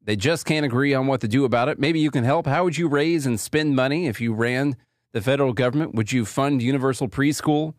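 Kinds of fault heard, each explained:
No technical fault can be heard anywhere in the speech recording, and the signal holds steady throughout.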